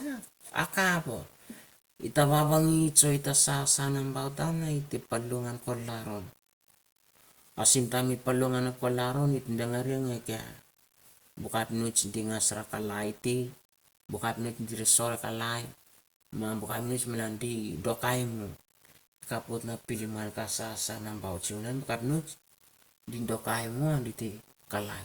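Speech throughout carries grainy distortion that rises and falls with the sound, roughly 25 dB below the signal, with quiet tails sputtering or dropping out. Unlike steady hiss, it vanishes in pauses, pointing to likely low bit depth without dither, about 8-bit rounding.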